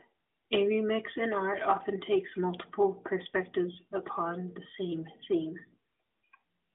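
Nothing stood out on listening to this speech recording, which comes across as a narrowband mobile call, with no point where the sound broke up, jumped or changed character.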